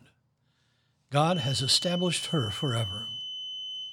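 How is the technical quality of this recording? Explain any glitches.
A feedback whistle runs from 1.23 s to the end. A steady 3 kHz tone sits roughly 10 dB under the speech, swelling and fading slowly in level. Likely a speaker-to-microphone loop held at the edge of feedback.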